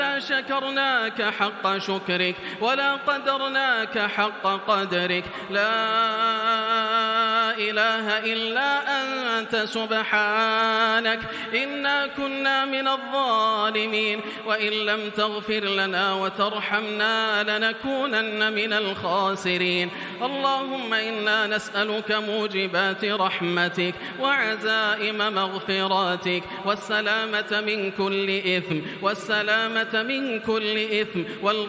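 No faults to report: no dropouts, clicks, level jumps, pitch or timing errors, or added noise at any point in the clip.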